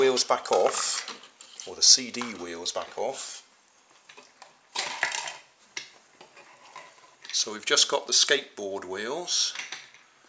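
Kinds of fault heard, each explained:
No dropouts, distortion, level jumps, timing errors or other technical faults can be heard anywhere in the audio.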